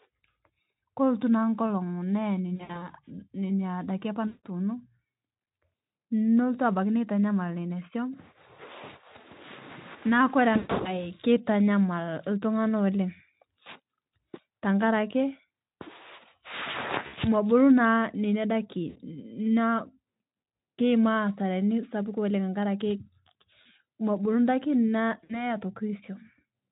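Speech carried over a Speex link with VoIP packet loss concealed by the speech codec at 2.55–2.87, 4.27–4.45, 10.53–11.10, 17.07–17.15, 18.89–19.00, 23.61–23.67 and 25.23–25.45 s. The decoder stretches the last pitch into fading buzzy tones or coloured noise, seen as smeared, decaying bands and shrinking waveform envelopes.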